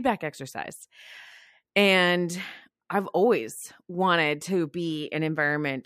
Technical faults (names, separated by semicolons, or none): none